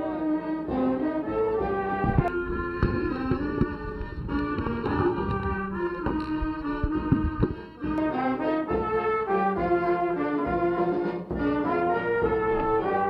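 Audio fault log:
2.28–7.98 s: channel delay (comb filtering). One channel lags by under a millisecond; summed to mono, it cancels evenly spaced notches from around 700 Hz, sounding hollow.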